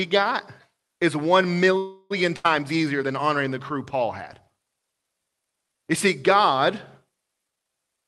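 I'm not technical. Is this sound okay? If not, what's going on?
No. From 1.77 to 2.12 s, right after "got is one", the sound stalls into a fading buzz or hiss for about a third of a second, then carries on with nothing lost. That's likely a call audio freeze from delayed network data.

From 2.36 to 2.46 s, a burst of packet loss drops about 80 ms of speech, covered by a brief fading buzz or hiss, just before "easier than honoring the".

From 7.47 s to 8.05 s, a jitter buffer speed-up trims backed-up audio, so the speech rushes at about 1.4 times normal speed without changing pitch.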